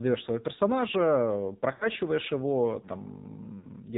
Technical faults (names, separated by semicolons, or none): AMR narrowband mobile codec; lost AMR speech frames